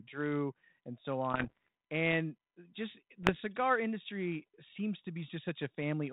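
From 1.33 to 1.68 s, after "and so", the speech breaks into pops and rough bursts with jumpy level. These are bit errors on an ADPCM link, about half a percent. Each flipped bit upsets the decoder's step size and predictor, so it rings on. A shorter burst follows at 3.23 to 3.40 s, before "industry seems to".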